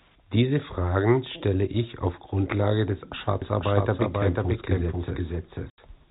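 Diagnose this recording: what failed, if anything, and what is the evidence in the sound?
Doubled audio track, from 3.42 s to the end of the speech. A second full-band copy of the signal enters abruptly and trails the original by about half a second, at roughly the same level, with no decay or room colouring. That points away from acoustic echo and toward the routing or capture stage. The likely cause is the same audio being picked up a second time through a slower path, or two misaligned copies held together in an edit.

Packet loss filled with silence, 5.70 to 5.78 s. An 80 ms hole cuts straight through the doubled speech, with hard edges at both ends. The gap is consistent with four consecutive 20 ms packets lost on the network. The receiver inserted digital silence instead of concealing the loss. The G.711 telephone band stays in place around the gap, with nothing above 4 kHz, so the dropout happened in transport rather than in the codec itself.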